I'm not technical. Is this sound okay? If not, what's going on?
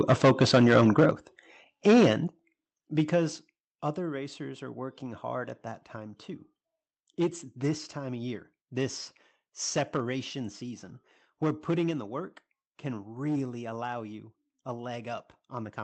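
No. There are two problems, both in how the microphone's loudness was handled.

From the very start to 1.1 seconds, and again from 1.86 to 2.11 seconds, the speech sounds harsh and crackly on its loudest moments. This is microphone overload: the input was most likely set too high, so the loudest parts hit a hard ceiling and had their tops sliced off. Roughly a tenth of the first stretch and a fifth of the second are cut this way. Unlike a bad connection, the sound doesn't drop out or warble. It just turns gritty exactly when it gets loudest.

The microphone volume stepped down at 0.12, 1.11, 2.28, 3.36 and 11.91 seconds. At each of these moments the voice and the background noise both get quieter in a single sudden step, and they stay at the lower level. This is likely the call software noticing the microphone was too hot and turning it down automatically. It isn't the speaker moving away from the microphone, which would change the level gradually. 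Several of these drops come right after the distorted stretches, at 1.11 and 2.28 seconds.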